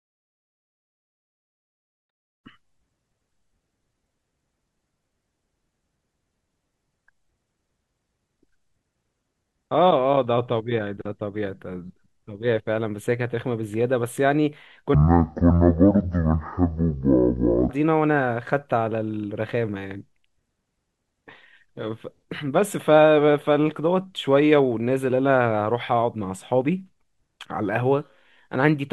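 From 14.94 to 17.69 s the speech suddenly drags to half speed and drops a full octave, sounding slow and thick, with a faint mirror image of the sound hovering in the upper half of the spectrum. This is stereo read as mono: the interleaved left and right samples were taken in sequence as one channel, so every pair of samples counts as two consecutive points in time, halving the speed and pitch.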